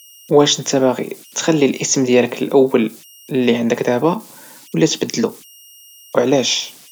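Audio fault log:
throughout, converter idle tones: a faint whistle around 3 kHz sits in the pauses, with grainy noise under the quieter speech, about 30 dB below the speech level. An undithered delta-sigma converter locks into repeating bit patterns on small inputs, and those cycles produce the tone.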